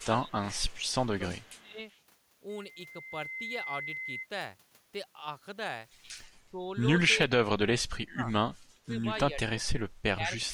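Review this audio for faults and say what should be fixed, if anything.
Speech suppressed in double talk occurs at 0.00–0.63 s, 1.13–1.80 s, 6.42–6.69 s, 7.29–9.70 s and from 10.02 s to the end. The speech dips by about 15 dB early on and by about 35 dB in the long stretch. The likely cause is an echo canceller mistaking the talker for loudspeaker echo while both sides speak. Better double-talk detection would prevent it.

Echo leak appears at 0.65–1.06 s and 1.43–1.99 s. A faint copy of the speech returns 380 ms late, about 35 dB below it. This is likely residual loudspeaker pickup that the far side's echo canceller missed. Stronger residual echo suppression would remove it.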